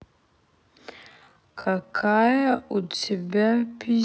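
This speech clip has a time-stretched section running from 1.05 s to the very end. The pace drops abruptly to half speed while the pitch holds steady, leaving the audio dragging, likely from software padding it out by repeating short slices.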